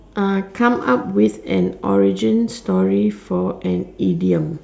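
No technical faults are audible.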